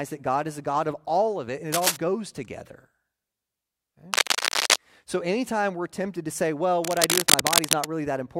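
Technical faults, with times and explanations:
1.72–1.97 s, 4.13–4.76 s and 6.84–7.92 s, cable scratch noise: dense, irregular crackling and rustling sits over the speech, starting just after "all of it and" at about the same level as the speech, then slightly louder than the speech in the second burst and in the longest, which follows "tempted to say well". The likely cause is a worn cable or connector being moved, so its contact resistance fluctuates rapidly and injects uneven noise bursts.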